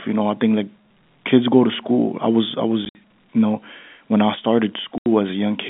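Packets went missing between 2.85 and 2.95 s and again from 4.98 to 5.06 s, and the receiver filled each gap with silence. This is packet loss filled with silence. The first spell, between "school I was I" and "you know when I", drops about 70 ms scattered over 100 ms, its longest hole 60 ms. The second removes a solid 80 ms. The hard-edged dropouts chop the narrowband telephone speech, and their sizes fit 10 ms packets.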